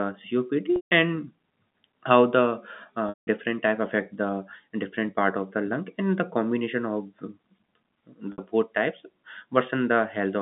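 Packet loss with pitch repetition shows up at 0.76 to 0.91 s, 3.09 to 3.27 s and 8.32 to 8.38 s. The receiver loops the last pitch period over each gap, so you get a brief buzzy hold that fades out before the speech comes back.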